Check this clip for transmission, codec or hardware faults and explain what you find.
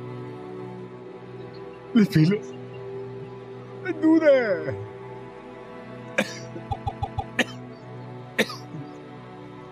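There's one fault here: repeated frames. From 6.70 to 7.33 s, a chunk of about 157 ms, which fits a run of around six compressed frames, gets sent again and plays four extra times. The sound stutters in place, and the clip runs about 0.63 s longer than it should.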